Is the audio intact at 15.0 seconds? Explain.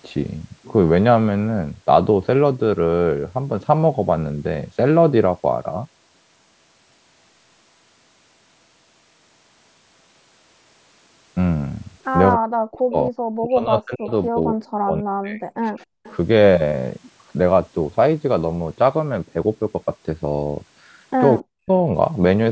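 No. At 15.0 seconds the speech sits inside a stretch of speech suppressed in double talk, running from 14.54 to 15.47 s. The level collapses by about 40 dB at its deepest. The likely cause is the far end speaking at the same moment: the echo canceller, unable to separate the local talker from loudspeaker echo, attenuated both together.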